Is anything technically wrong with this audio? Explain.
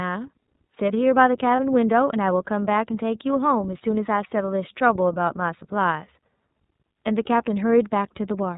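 Yes, a couple of things. The whole clip runs through the iLBC codec. It's narrowband, so nothing above 4 kHz survives, and the speech comes across plainly rough and synthetic, which fits its 30 ms frame mode at 13.33 kbps.

Around 1.56 s there's a lost iLBC frame, about 30 ms. The decoder fills the gap by repeating the last pitch cycle with some noise, giving a brief held, buzzy vowel, then recovers almost immediately.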